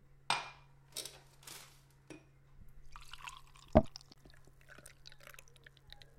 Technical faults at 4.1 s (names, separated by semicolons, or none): CD skip